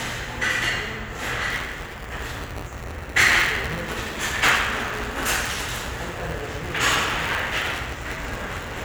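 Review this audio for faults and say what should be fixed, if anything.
Buffer tearing runs from 1.50 s to the end as a steady 172 Hz rattle, which fits a 256-sample buffer. Writer and reader have slipped, so roughly a tenth of each period replays sound about 10 ms old, hard-joined at both edges. Unlike underrun dropouts, there are no silent gaps, and the buzz disappears whenever the sound does. Keep the write pointer locked a fixed safe margin ahead of the hardware read pointer, resynchronising every period.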